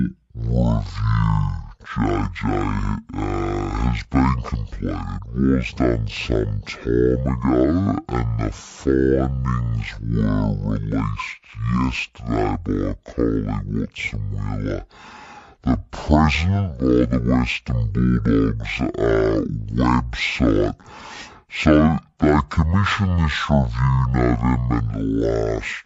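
From the start, the speech plays at half speed, an octave low: stereo read as mono, interleaved left and right samples taken as one channel. Unlike a simple slowdown, a faint mirrored image fills the upper spectrum.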